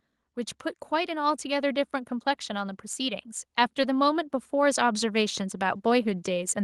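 From 2.46 s to the end at 6.64 s, automatic gain rising is audible. The gain control judged the speech too quiet and kept turning it up. Voice and background noise swell together, slowly, over several seconds.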